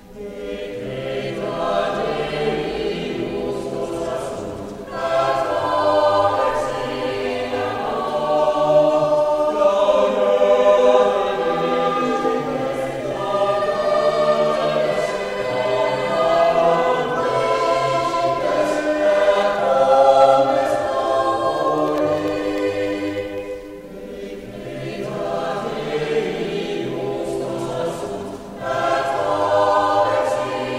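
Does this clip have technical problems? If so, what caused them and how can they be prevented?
Yes. From 21.58 to 23.38 s a regular ticking runs through the sound, roughly twenty small clicks spaced 0.1 s apart. These are periodic USB or driver dropouts: something stalled the audio path every tenth of a second, dropping a tiny fraction of a millisecond each time into silence. Disabling the interfering background task, or giving the interface its own USB controller and a larger buffer, prevents it.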